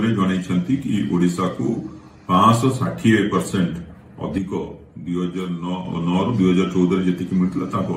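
At 4.38 s a sudden gain jump drops sound and background noise together by about 7 dB until 5.85 s, likely an unramped gain change, seen as an abrupt waveform step.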